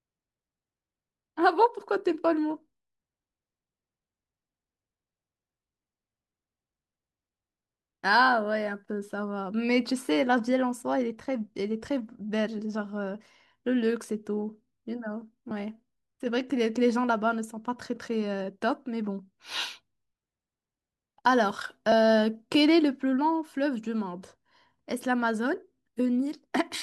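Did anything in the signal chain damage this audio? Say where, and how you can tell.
Yes. Compressed frames skipped at 21.91 s: at the codec stage, about two 24 ms frames never decode, so the speech jumps ahead roughly 50 ms.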